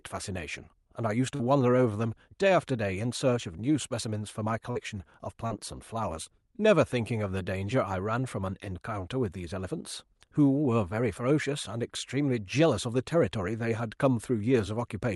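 Short concealed packet loss occurs at 1.35–1.41 s, 4.71–4.77 s, 5.47–5.52 s and 6.24–6.31 s, where 40, 40, 20 and 20 ms of audio arrived too late for the Opus decoder. The receiver extended the preceding sound to cover each gap, then blended back into the real speech, producing a brief smear or wobble. Above the call path's coding noise, the top end stops near 12 kHz.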